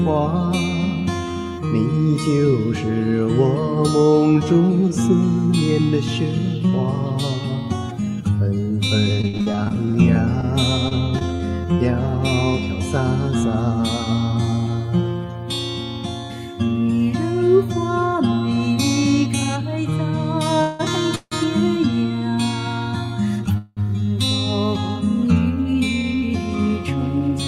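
Repeated packet loss (robotic sound) runs from 9.21 to 11.41 s. Fifteen short holes, the longest 60 ms, are each patched by stretching the preceding sound, so the passage turns choppy, with about 260 ms of real audio lost outright.

Call audio freezes occur at 20.61, 21.15 and 23.58 s, each lasting roughly 0.16 to 0.19 s. The sound hangs as a fading buzz, dropping briefly to silence at 21.15 s, then resumes exactly where it left off. The likely cause is delayed packets draining the jitter buffer.

A jitter buffer speed-up follows from 25.64 to 27.30 s. Having built up excess delay, the receiver trims tiny pitch-period slices repeatedly, about a tenth of a second in total. The audio plays at 105% speed without any pitch change, sounding slightly hurried.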